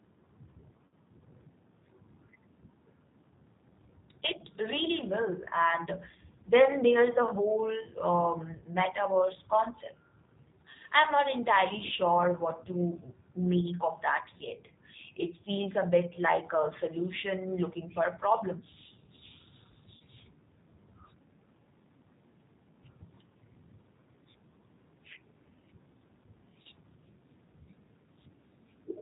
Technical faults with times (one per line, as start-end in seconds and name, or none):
0.00-29.02 G.729 codec
0.86-0.93 VoIP packet loss concealed by the speech codec
19.97-20.01 VoIP packet loss concealed by the speech codec
26.62-26.67 VoIP packet loss concealed by the speech codec